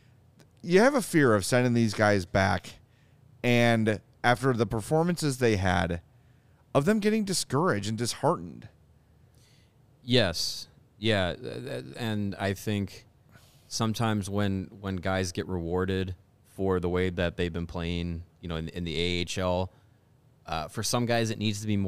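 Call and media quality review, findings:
No audible faults found in this speech clip.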